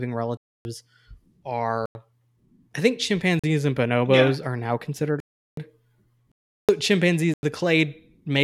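Blocks of digital silence cut the speech at 0.37, 1.86, 3.39, 5.20, 6.32 and 7.34 s. Each lasts 42 to 372 ms. Sound cuts out and back with no fade. The 93 and 372 ms gaps fit unfilled 4096- and 16384-sample buffers.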